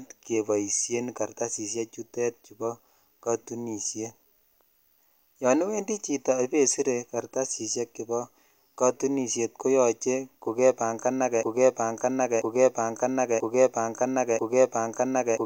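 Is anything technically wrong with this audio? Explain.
Yes. From 11.43 s to the end, a broken-record loop: a segment of about 0.99 s repeats exactly, back to back, four times. The player or stream likely stalled and kept resending its last buffered fragment, so the audio due in that stretch is lost.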